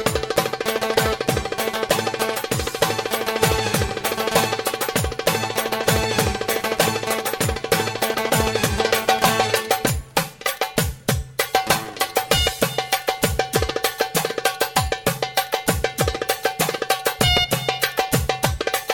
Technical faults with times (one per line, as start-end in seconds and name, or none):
none